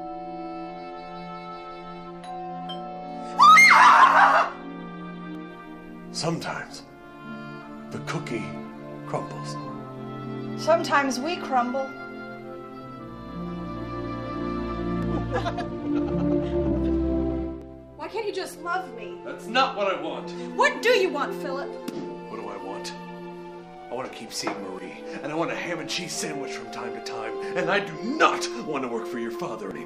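From 15.30 to 17.48 s, a time-stretched section runs about 1.79 times fast. Pitch holds steady. It sounds rushed, likely from software dropping short pieces.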